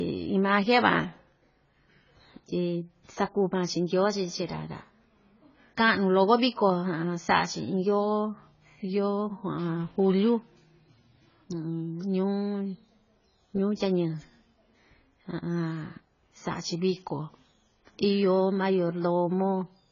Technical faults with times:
0.00-19.91 AAC compression

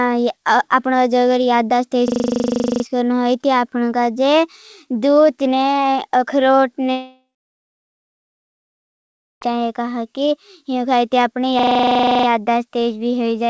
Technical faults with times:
2.08-2.84 system hang loop
6.92-9.43 long network dropout
11.59-12.27 system hang loop

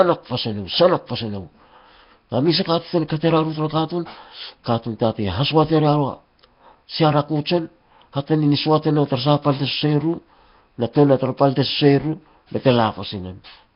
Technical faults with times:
0.00-13.76 Nellymoser compression

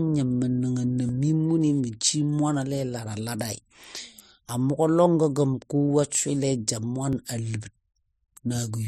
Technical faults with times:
1.09 dropped buffer (overrun)
5.06 dropped buffer (overrun)
7.13 dropped buffer (overrun)

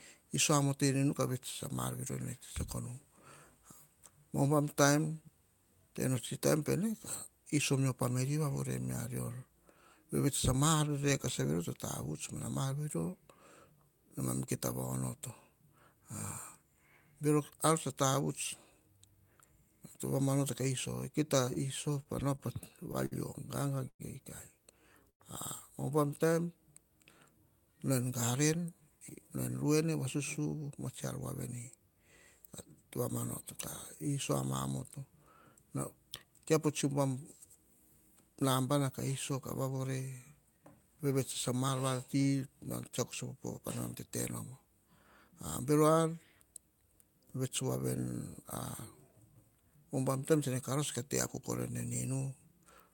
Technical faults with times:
21.45-23.14 repeated stalls (stutter)
23.88-24.01 call audio freeze
25.10-25.22 call audio freeze
28.33-31.81 jitter buffer speed-up

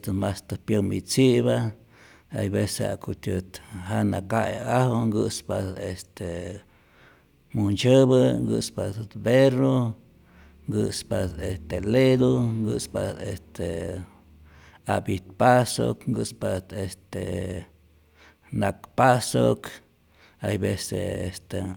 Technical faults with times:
none

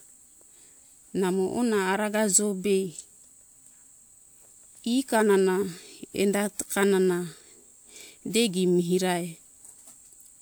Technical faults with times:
none

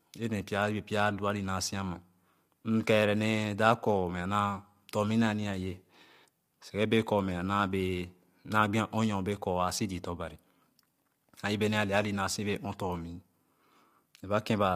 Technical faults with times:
0.00-14.75 low-delay AAC compression

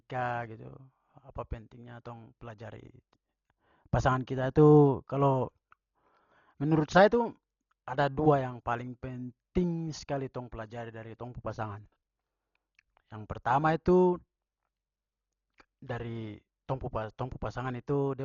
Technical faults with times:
0.00-18.24 Dolby Digital compression

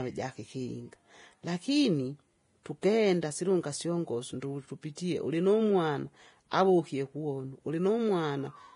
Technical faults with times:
0.00-8.76 Vorbis compression

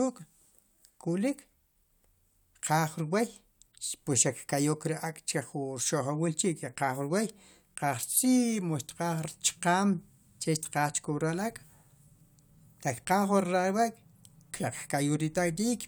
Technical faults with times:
none

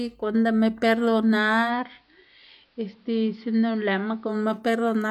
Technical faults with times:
1.61-4.37 digital radio blending to analogue

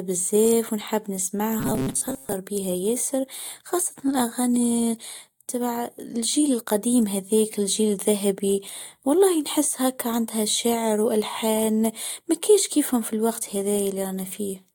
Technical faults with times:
1.60-2.34 robotic sound from repeated short buffers

